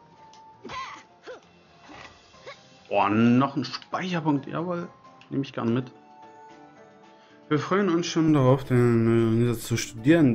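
From 0.0 to 8.28 s the audio sounds dull and boxy, with nothing above 6.8 kHz. It is around 5 dB quieter, over faint new noise. It clears at 8.28 s without a gap. Likely cause: input switched to a poorer device.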